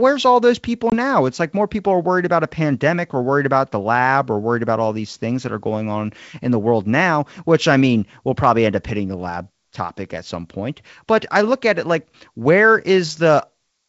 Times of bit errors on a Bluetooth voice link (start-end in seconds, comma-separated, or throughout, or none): none